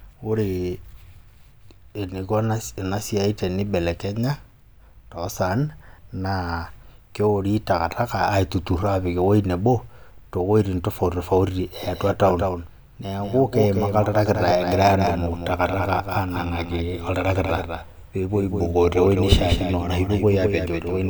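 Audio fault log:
11.83 s to end, doubled audio track: a second full-band copy enters abruptly, about 5 dB quieter and roughly a fifth of a second behind, with no decay, likely from a slower capture path. The waveform shows offset duplicate envelopes, and the spectrogram shows each onset repeated.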